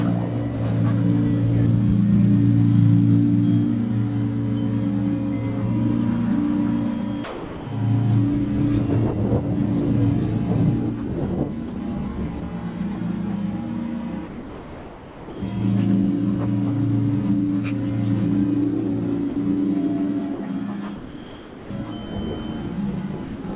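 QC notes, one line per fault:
Throughout: computer activity noise. Load changes in the computer's processor, graphics card or mouse push on the ground line the audio circuit shares, so that interference rides along with the signal. It is heard as a buzz pulsing at roughly 1 kHz, sitting roughly 35 dB below the signal, and it swells and falls back with the machine's activity, not with the audio. It stays under the whole clip, where the band stops near 4 kHz, as a narrowband call codec would cause.
7.24–7.66 s, 11.68–11.76 s, 12.40–12.42 s, 14.28–15.42 s, 19.30–19.36 s, 20.34–20.40 s, 20.96–21.70 s, 23.24–23.44 s: sound dropped by the voice detector. The sender's detector likely judged the sound to be background and stopped transmitting, and the receiver filled each gap with generated comfort noise. The audio is cut out and replaced by steady noise until the detector triggers again. The gaps run from 20 ms up to 1.14 s, and the longest ones are at 14.28 s, 20.96 s and 7.24 s.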